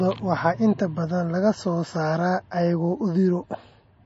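From start to finish the speech carries plainly audible damage that points to MP3 compression, likely at a low bitrate around 32 kbps. The encoder has discarded all content above 7.6 kHz, so sibilants sound dull and clipped, while weak frequency lines flicker in and out between frames, giving a watery, swirling texture. On a spectrogram this appears as a hard ceiling at 7.6 kHz with patchy, blocky gaps in the fainter detail below it.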